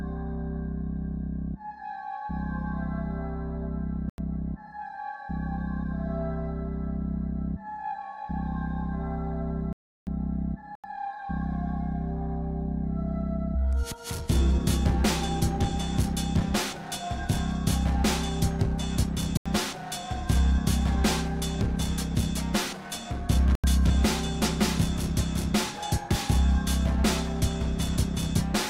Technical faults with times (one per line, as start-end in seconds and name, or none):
4.10-4.18 block of digital silence
9.73-10.07 block of digital silence
10.75-10.84 block of digital silence
19.37-19.46 block of digital silence
23.55-23.64 block of digital silence